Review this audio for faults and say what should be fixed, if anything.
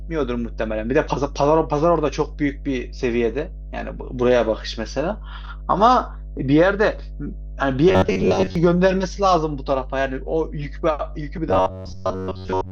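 Mains hum runs through the whole speech clip. It is a steady low tone at 50 Hz with a few low harmonics above it. It sits only about 15 dB below the speech. A ground loop or a nearby transformer is feeding the power line into the signal path. To prevent it, break the ground loop with balanced connections or an isolator, and keep cables away from power supplies.

Robotic sound from repeated short buffers appears from 7.89 to 8.55 s and again from 11.49 s to the end at 12.72 s. The speech turns into a rigid, metallic buzz at 93.8 Hz that still roughly tracks the words. The likely cause is audio arriving too slowly, with the software looping the last short block to fill the gap. That pitch fits a block of about 10.7 ms. Most of the audio in those spans is repeated rather than real. To prevent it, enlarge the buffer or reduce processing load so fresh audio arrives on time.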